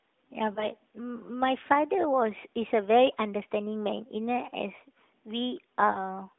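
At 0.54 s and again at 5.92 s, the speech shows the signature of lost AMR speech frames. Each event points to a single 20 ms frame discarded after failing its checksum. The decoder filled the gap by repeating its last good pitch and vocal-tract parameters at reduced gain. The result is a brief dip or warble, lasting to about 0.67 s and 6.03 s respectively, heard through the narrowband mobile line's 200 Hz to 3.6 kHz band.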